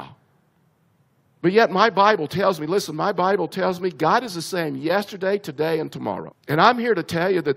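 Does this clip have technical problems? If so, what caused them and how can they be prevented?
Yes. At about 6.31 s the speech jumps ahead abruptly with a small blip, as though a piece of the recording simply isn't there. That points to a likely stream segment skipped: one chunk of the segmented stream didn't load in time, so the player moved on to the next one and a stretch of the programme was lost. To prevent it, give the player a deeper buffer and have it retry failed segment requests rather than skipping past them.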